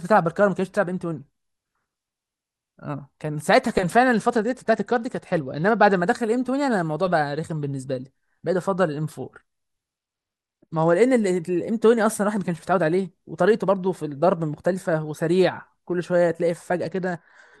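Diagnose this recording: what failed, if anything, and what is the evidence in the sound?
The fault sits in the codec stage: a Bluetooth SBC bit pool drop, occurring three times, from 4.13 to 6.00 s, 9.98 to 10.95 s, and 16.83 s to the end of the clip. In each span the speech loses its top end and picks up a gritty, granular noise, then snaps back in the first two. The encoder cut its bit allocation, which fits a fall from a bit pool of 31 to about 11, near 83 kbps. The highest sub-bands got few or no bits and the remainder were coarsely quantised.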